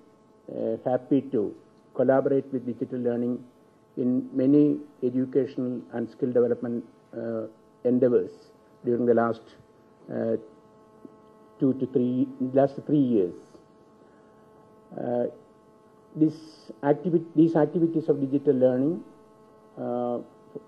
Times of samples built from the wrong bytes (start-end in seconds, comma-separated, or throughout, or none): none